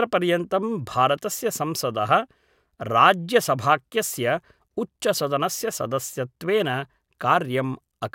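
No technical faults are audible.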